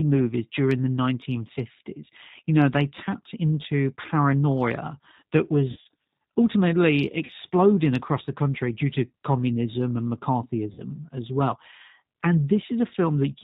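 Throughout, the speech carries plainly audible G.729 codec damage: nothing above 4 kHz, and a rough, slightly synthetic texture from rebuilding each frame out of a vocal tract filter, a pitch predictor and a few pulses. This fits an 8 kbit/s G.729A stream.

VoIP packet loss concealed by the speech codec occurs at 5.71 to 5.87 s (about 110 ms missing, spread over 140 ms, longest gap 50 ms), 7.25 to 7.31 s (40 ms) and 10.72 to 10.82 s (60 ms). The decoder stretches the last pitch and filter into a fading buzzy tone or coloured noise, and the sound stays weak briefly afterward.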